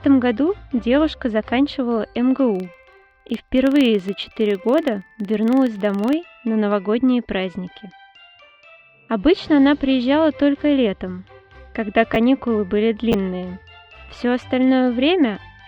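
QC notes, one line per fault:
2.55–6.21 s, filter restarted on every block: a tick at each block start gives a buzz near 21.5 Hz that tracks the level. That rate fits a 2048-sample block. Unlike random clicks, it is strictly periodic.
12.14–12.16 s and 13.12–13.14 s, chunks out of order: a 10 ms chunk plays one chunk late, so the audio jumbles briefly across three hard joins. Nothing is missing, unlike a dropout.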